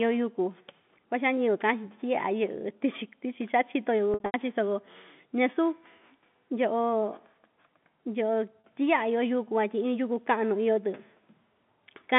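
Packet loss with pitch repetition first appears between 4.14 and 4.34 s. About 160 ms goes missing, scattered across 200 ms, with the longest run 80 ms. The receiver fills each gap by repeating the last pitch period. That run outlasts the fade, so the sound turns buzzy, thins to silence, then cross-fades back. At 8.61 s a 40 ms loss, which fits two 20 ms packets, leaves only a brief held, buzzy tone. Both sit within narrow G.711 telephone coding.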